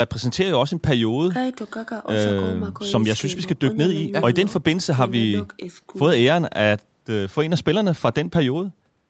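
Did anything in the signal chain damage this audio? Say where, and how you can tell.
No, nothing in the chain damaged this speech.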